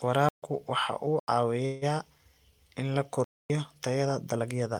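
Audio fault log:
0.29–0.43 s, 1.20–1.28 s and 3.24–3.50 s, block of digital silence: the sound drops abruptly to silence for 140 ms, 85 ms and 256 ms. The middle gap fits a 4096-sample block. The longer two are heard as holes.
1.65–1.84 s, call audio freeze: the last sound is stretched into a fading buzz or hiss lasting about 164 ms, then speech resumes exactly where it stopped, with nothing lost and everything after it running 164 ms late. The likely cause is delayed packets draining the jitter buffer.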